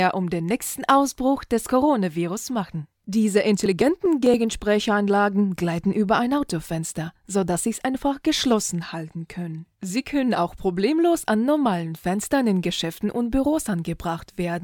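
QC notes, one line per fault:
3.66–4.34 s, processor overload crackle: around ten buffers of roughly 10 ms missed their deadline and were skipped, leaving hard-edged gaps heard as gritty tearing.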